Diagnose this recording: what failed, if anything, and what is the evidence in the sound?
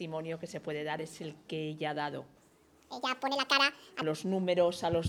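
From 2.37 s to 4.02 s, a section at the wrong speed jumps out. The sound suddenly runs about 1.63 times too fast. Pitch rises with it, by close to ten semitones, so everything turns high and hurried. Speed and pitch return together at 4.02 s. Both shift as one, with no pitch correction. That points to a clock mismatch. The likely cause is an editing or playback stage reading this stretch at the wrong rate.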